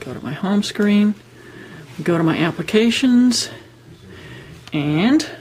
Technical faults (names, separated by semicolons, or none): compressed frames skipped